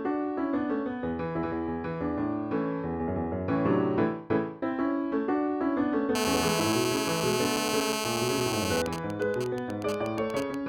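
From 6.15 s to 8.82 s a GSM phone buzz appears: a 2G handset in an active call transmits bursts at about 217 Hz, and the audio circuitry rectifies them into a hard, raspy buzz rich in harmonics, sitting only about 2 dB below the signal.

From 8.86 s to 10.55 s the buzz turns into GSM signalling bursts, consistent with the caller falling silent. The phone now sends only sparse groups of bursts, heard as even ticks with a longer 217 Hz buzz twice a second, roughly 10 dB under the signal.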